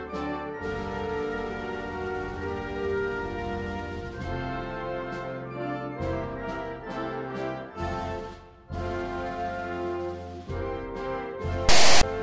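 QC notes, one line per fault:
11.69–12.03 s, file tags played as audio: near the end, a block of text tags followed by zero padding is decoded as if it were samples. The text bytes produce a loud, harsh rasp that is offset to one side, and the padding drops to dead silence before the burst ends. The hard on and off edges, the one-sided offset and the blank tail separate it from a codec glitch or dropout, which would stay tied to the surrounding audio.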